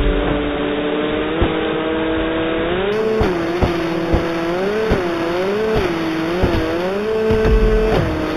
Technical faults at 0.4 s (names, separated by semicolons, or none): none